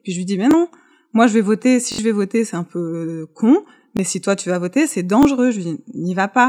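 Audio arrived late, so the device repeated buffers, which fits a 1024-sample buffer of about 21 ms. The result is brief stutters with hard joins at 0.51–0.53, 1.92–1.98 (three extra repeats), 3.97–3.99 and 5.23–5.25 s.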